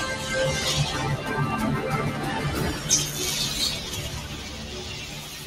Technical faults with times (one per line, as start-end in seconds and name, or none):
0.00-5.46 noise suppressor applied to music or sounds
4.23-4.72 sound cut by the noise suppressor
5.04-5.36 sound cut by the noise suppressor